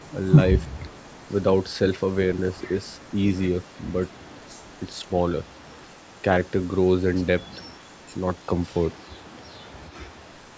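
A faint delayed copy of the speech trails the main signal, about 346 ms behind. This is echo leak. It appears at 0.0 to 0.28 s, 0.59 to 1.32 s, 2.34 to 5.1 s, 5.44 to 6.22 s and 7.45 s to the end. The first burst is strongest, roughly 25 dB below the speech. The others sit lower, around 35 to 40 dB down. The likely cause is a far-end loudspeaker whose echo canceller let some of its own output return.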